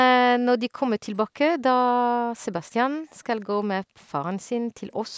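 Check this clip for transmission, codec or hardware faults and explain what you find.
Two kinds of fault from the call's echo handling appear in this speech.

Background gated by the echo canceller at 2.01–2.42 s, 3.84–3.95 s and 4.58–4.75 s: while the far side's sound played, the canceller clamped the microphone. The room sound drops by about 40 dB, then returns.

Echo leak at 3.41–3.45 s: a very faint, brief copy of the speech arrives 166 ms late. It is likely residue that the far end's canceller failed to strip from its loudspeaker pickup.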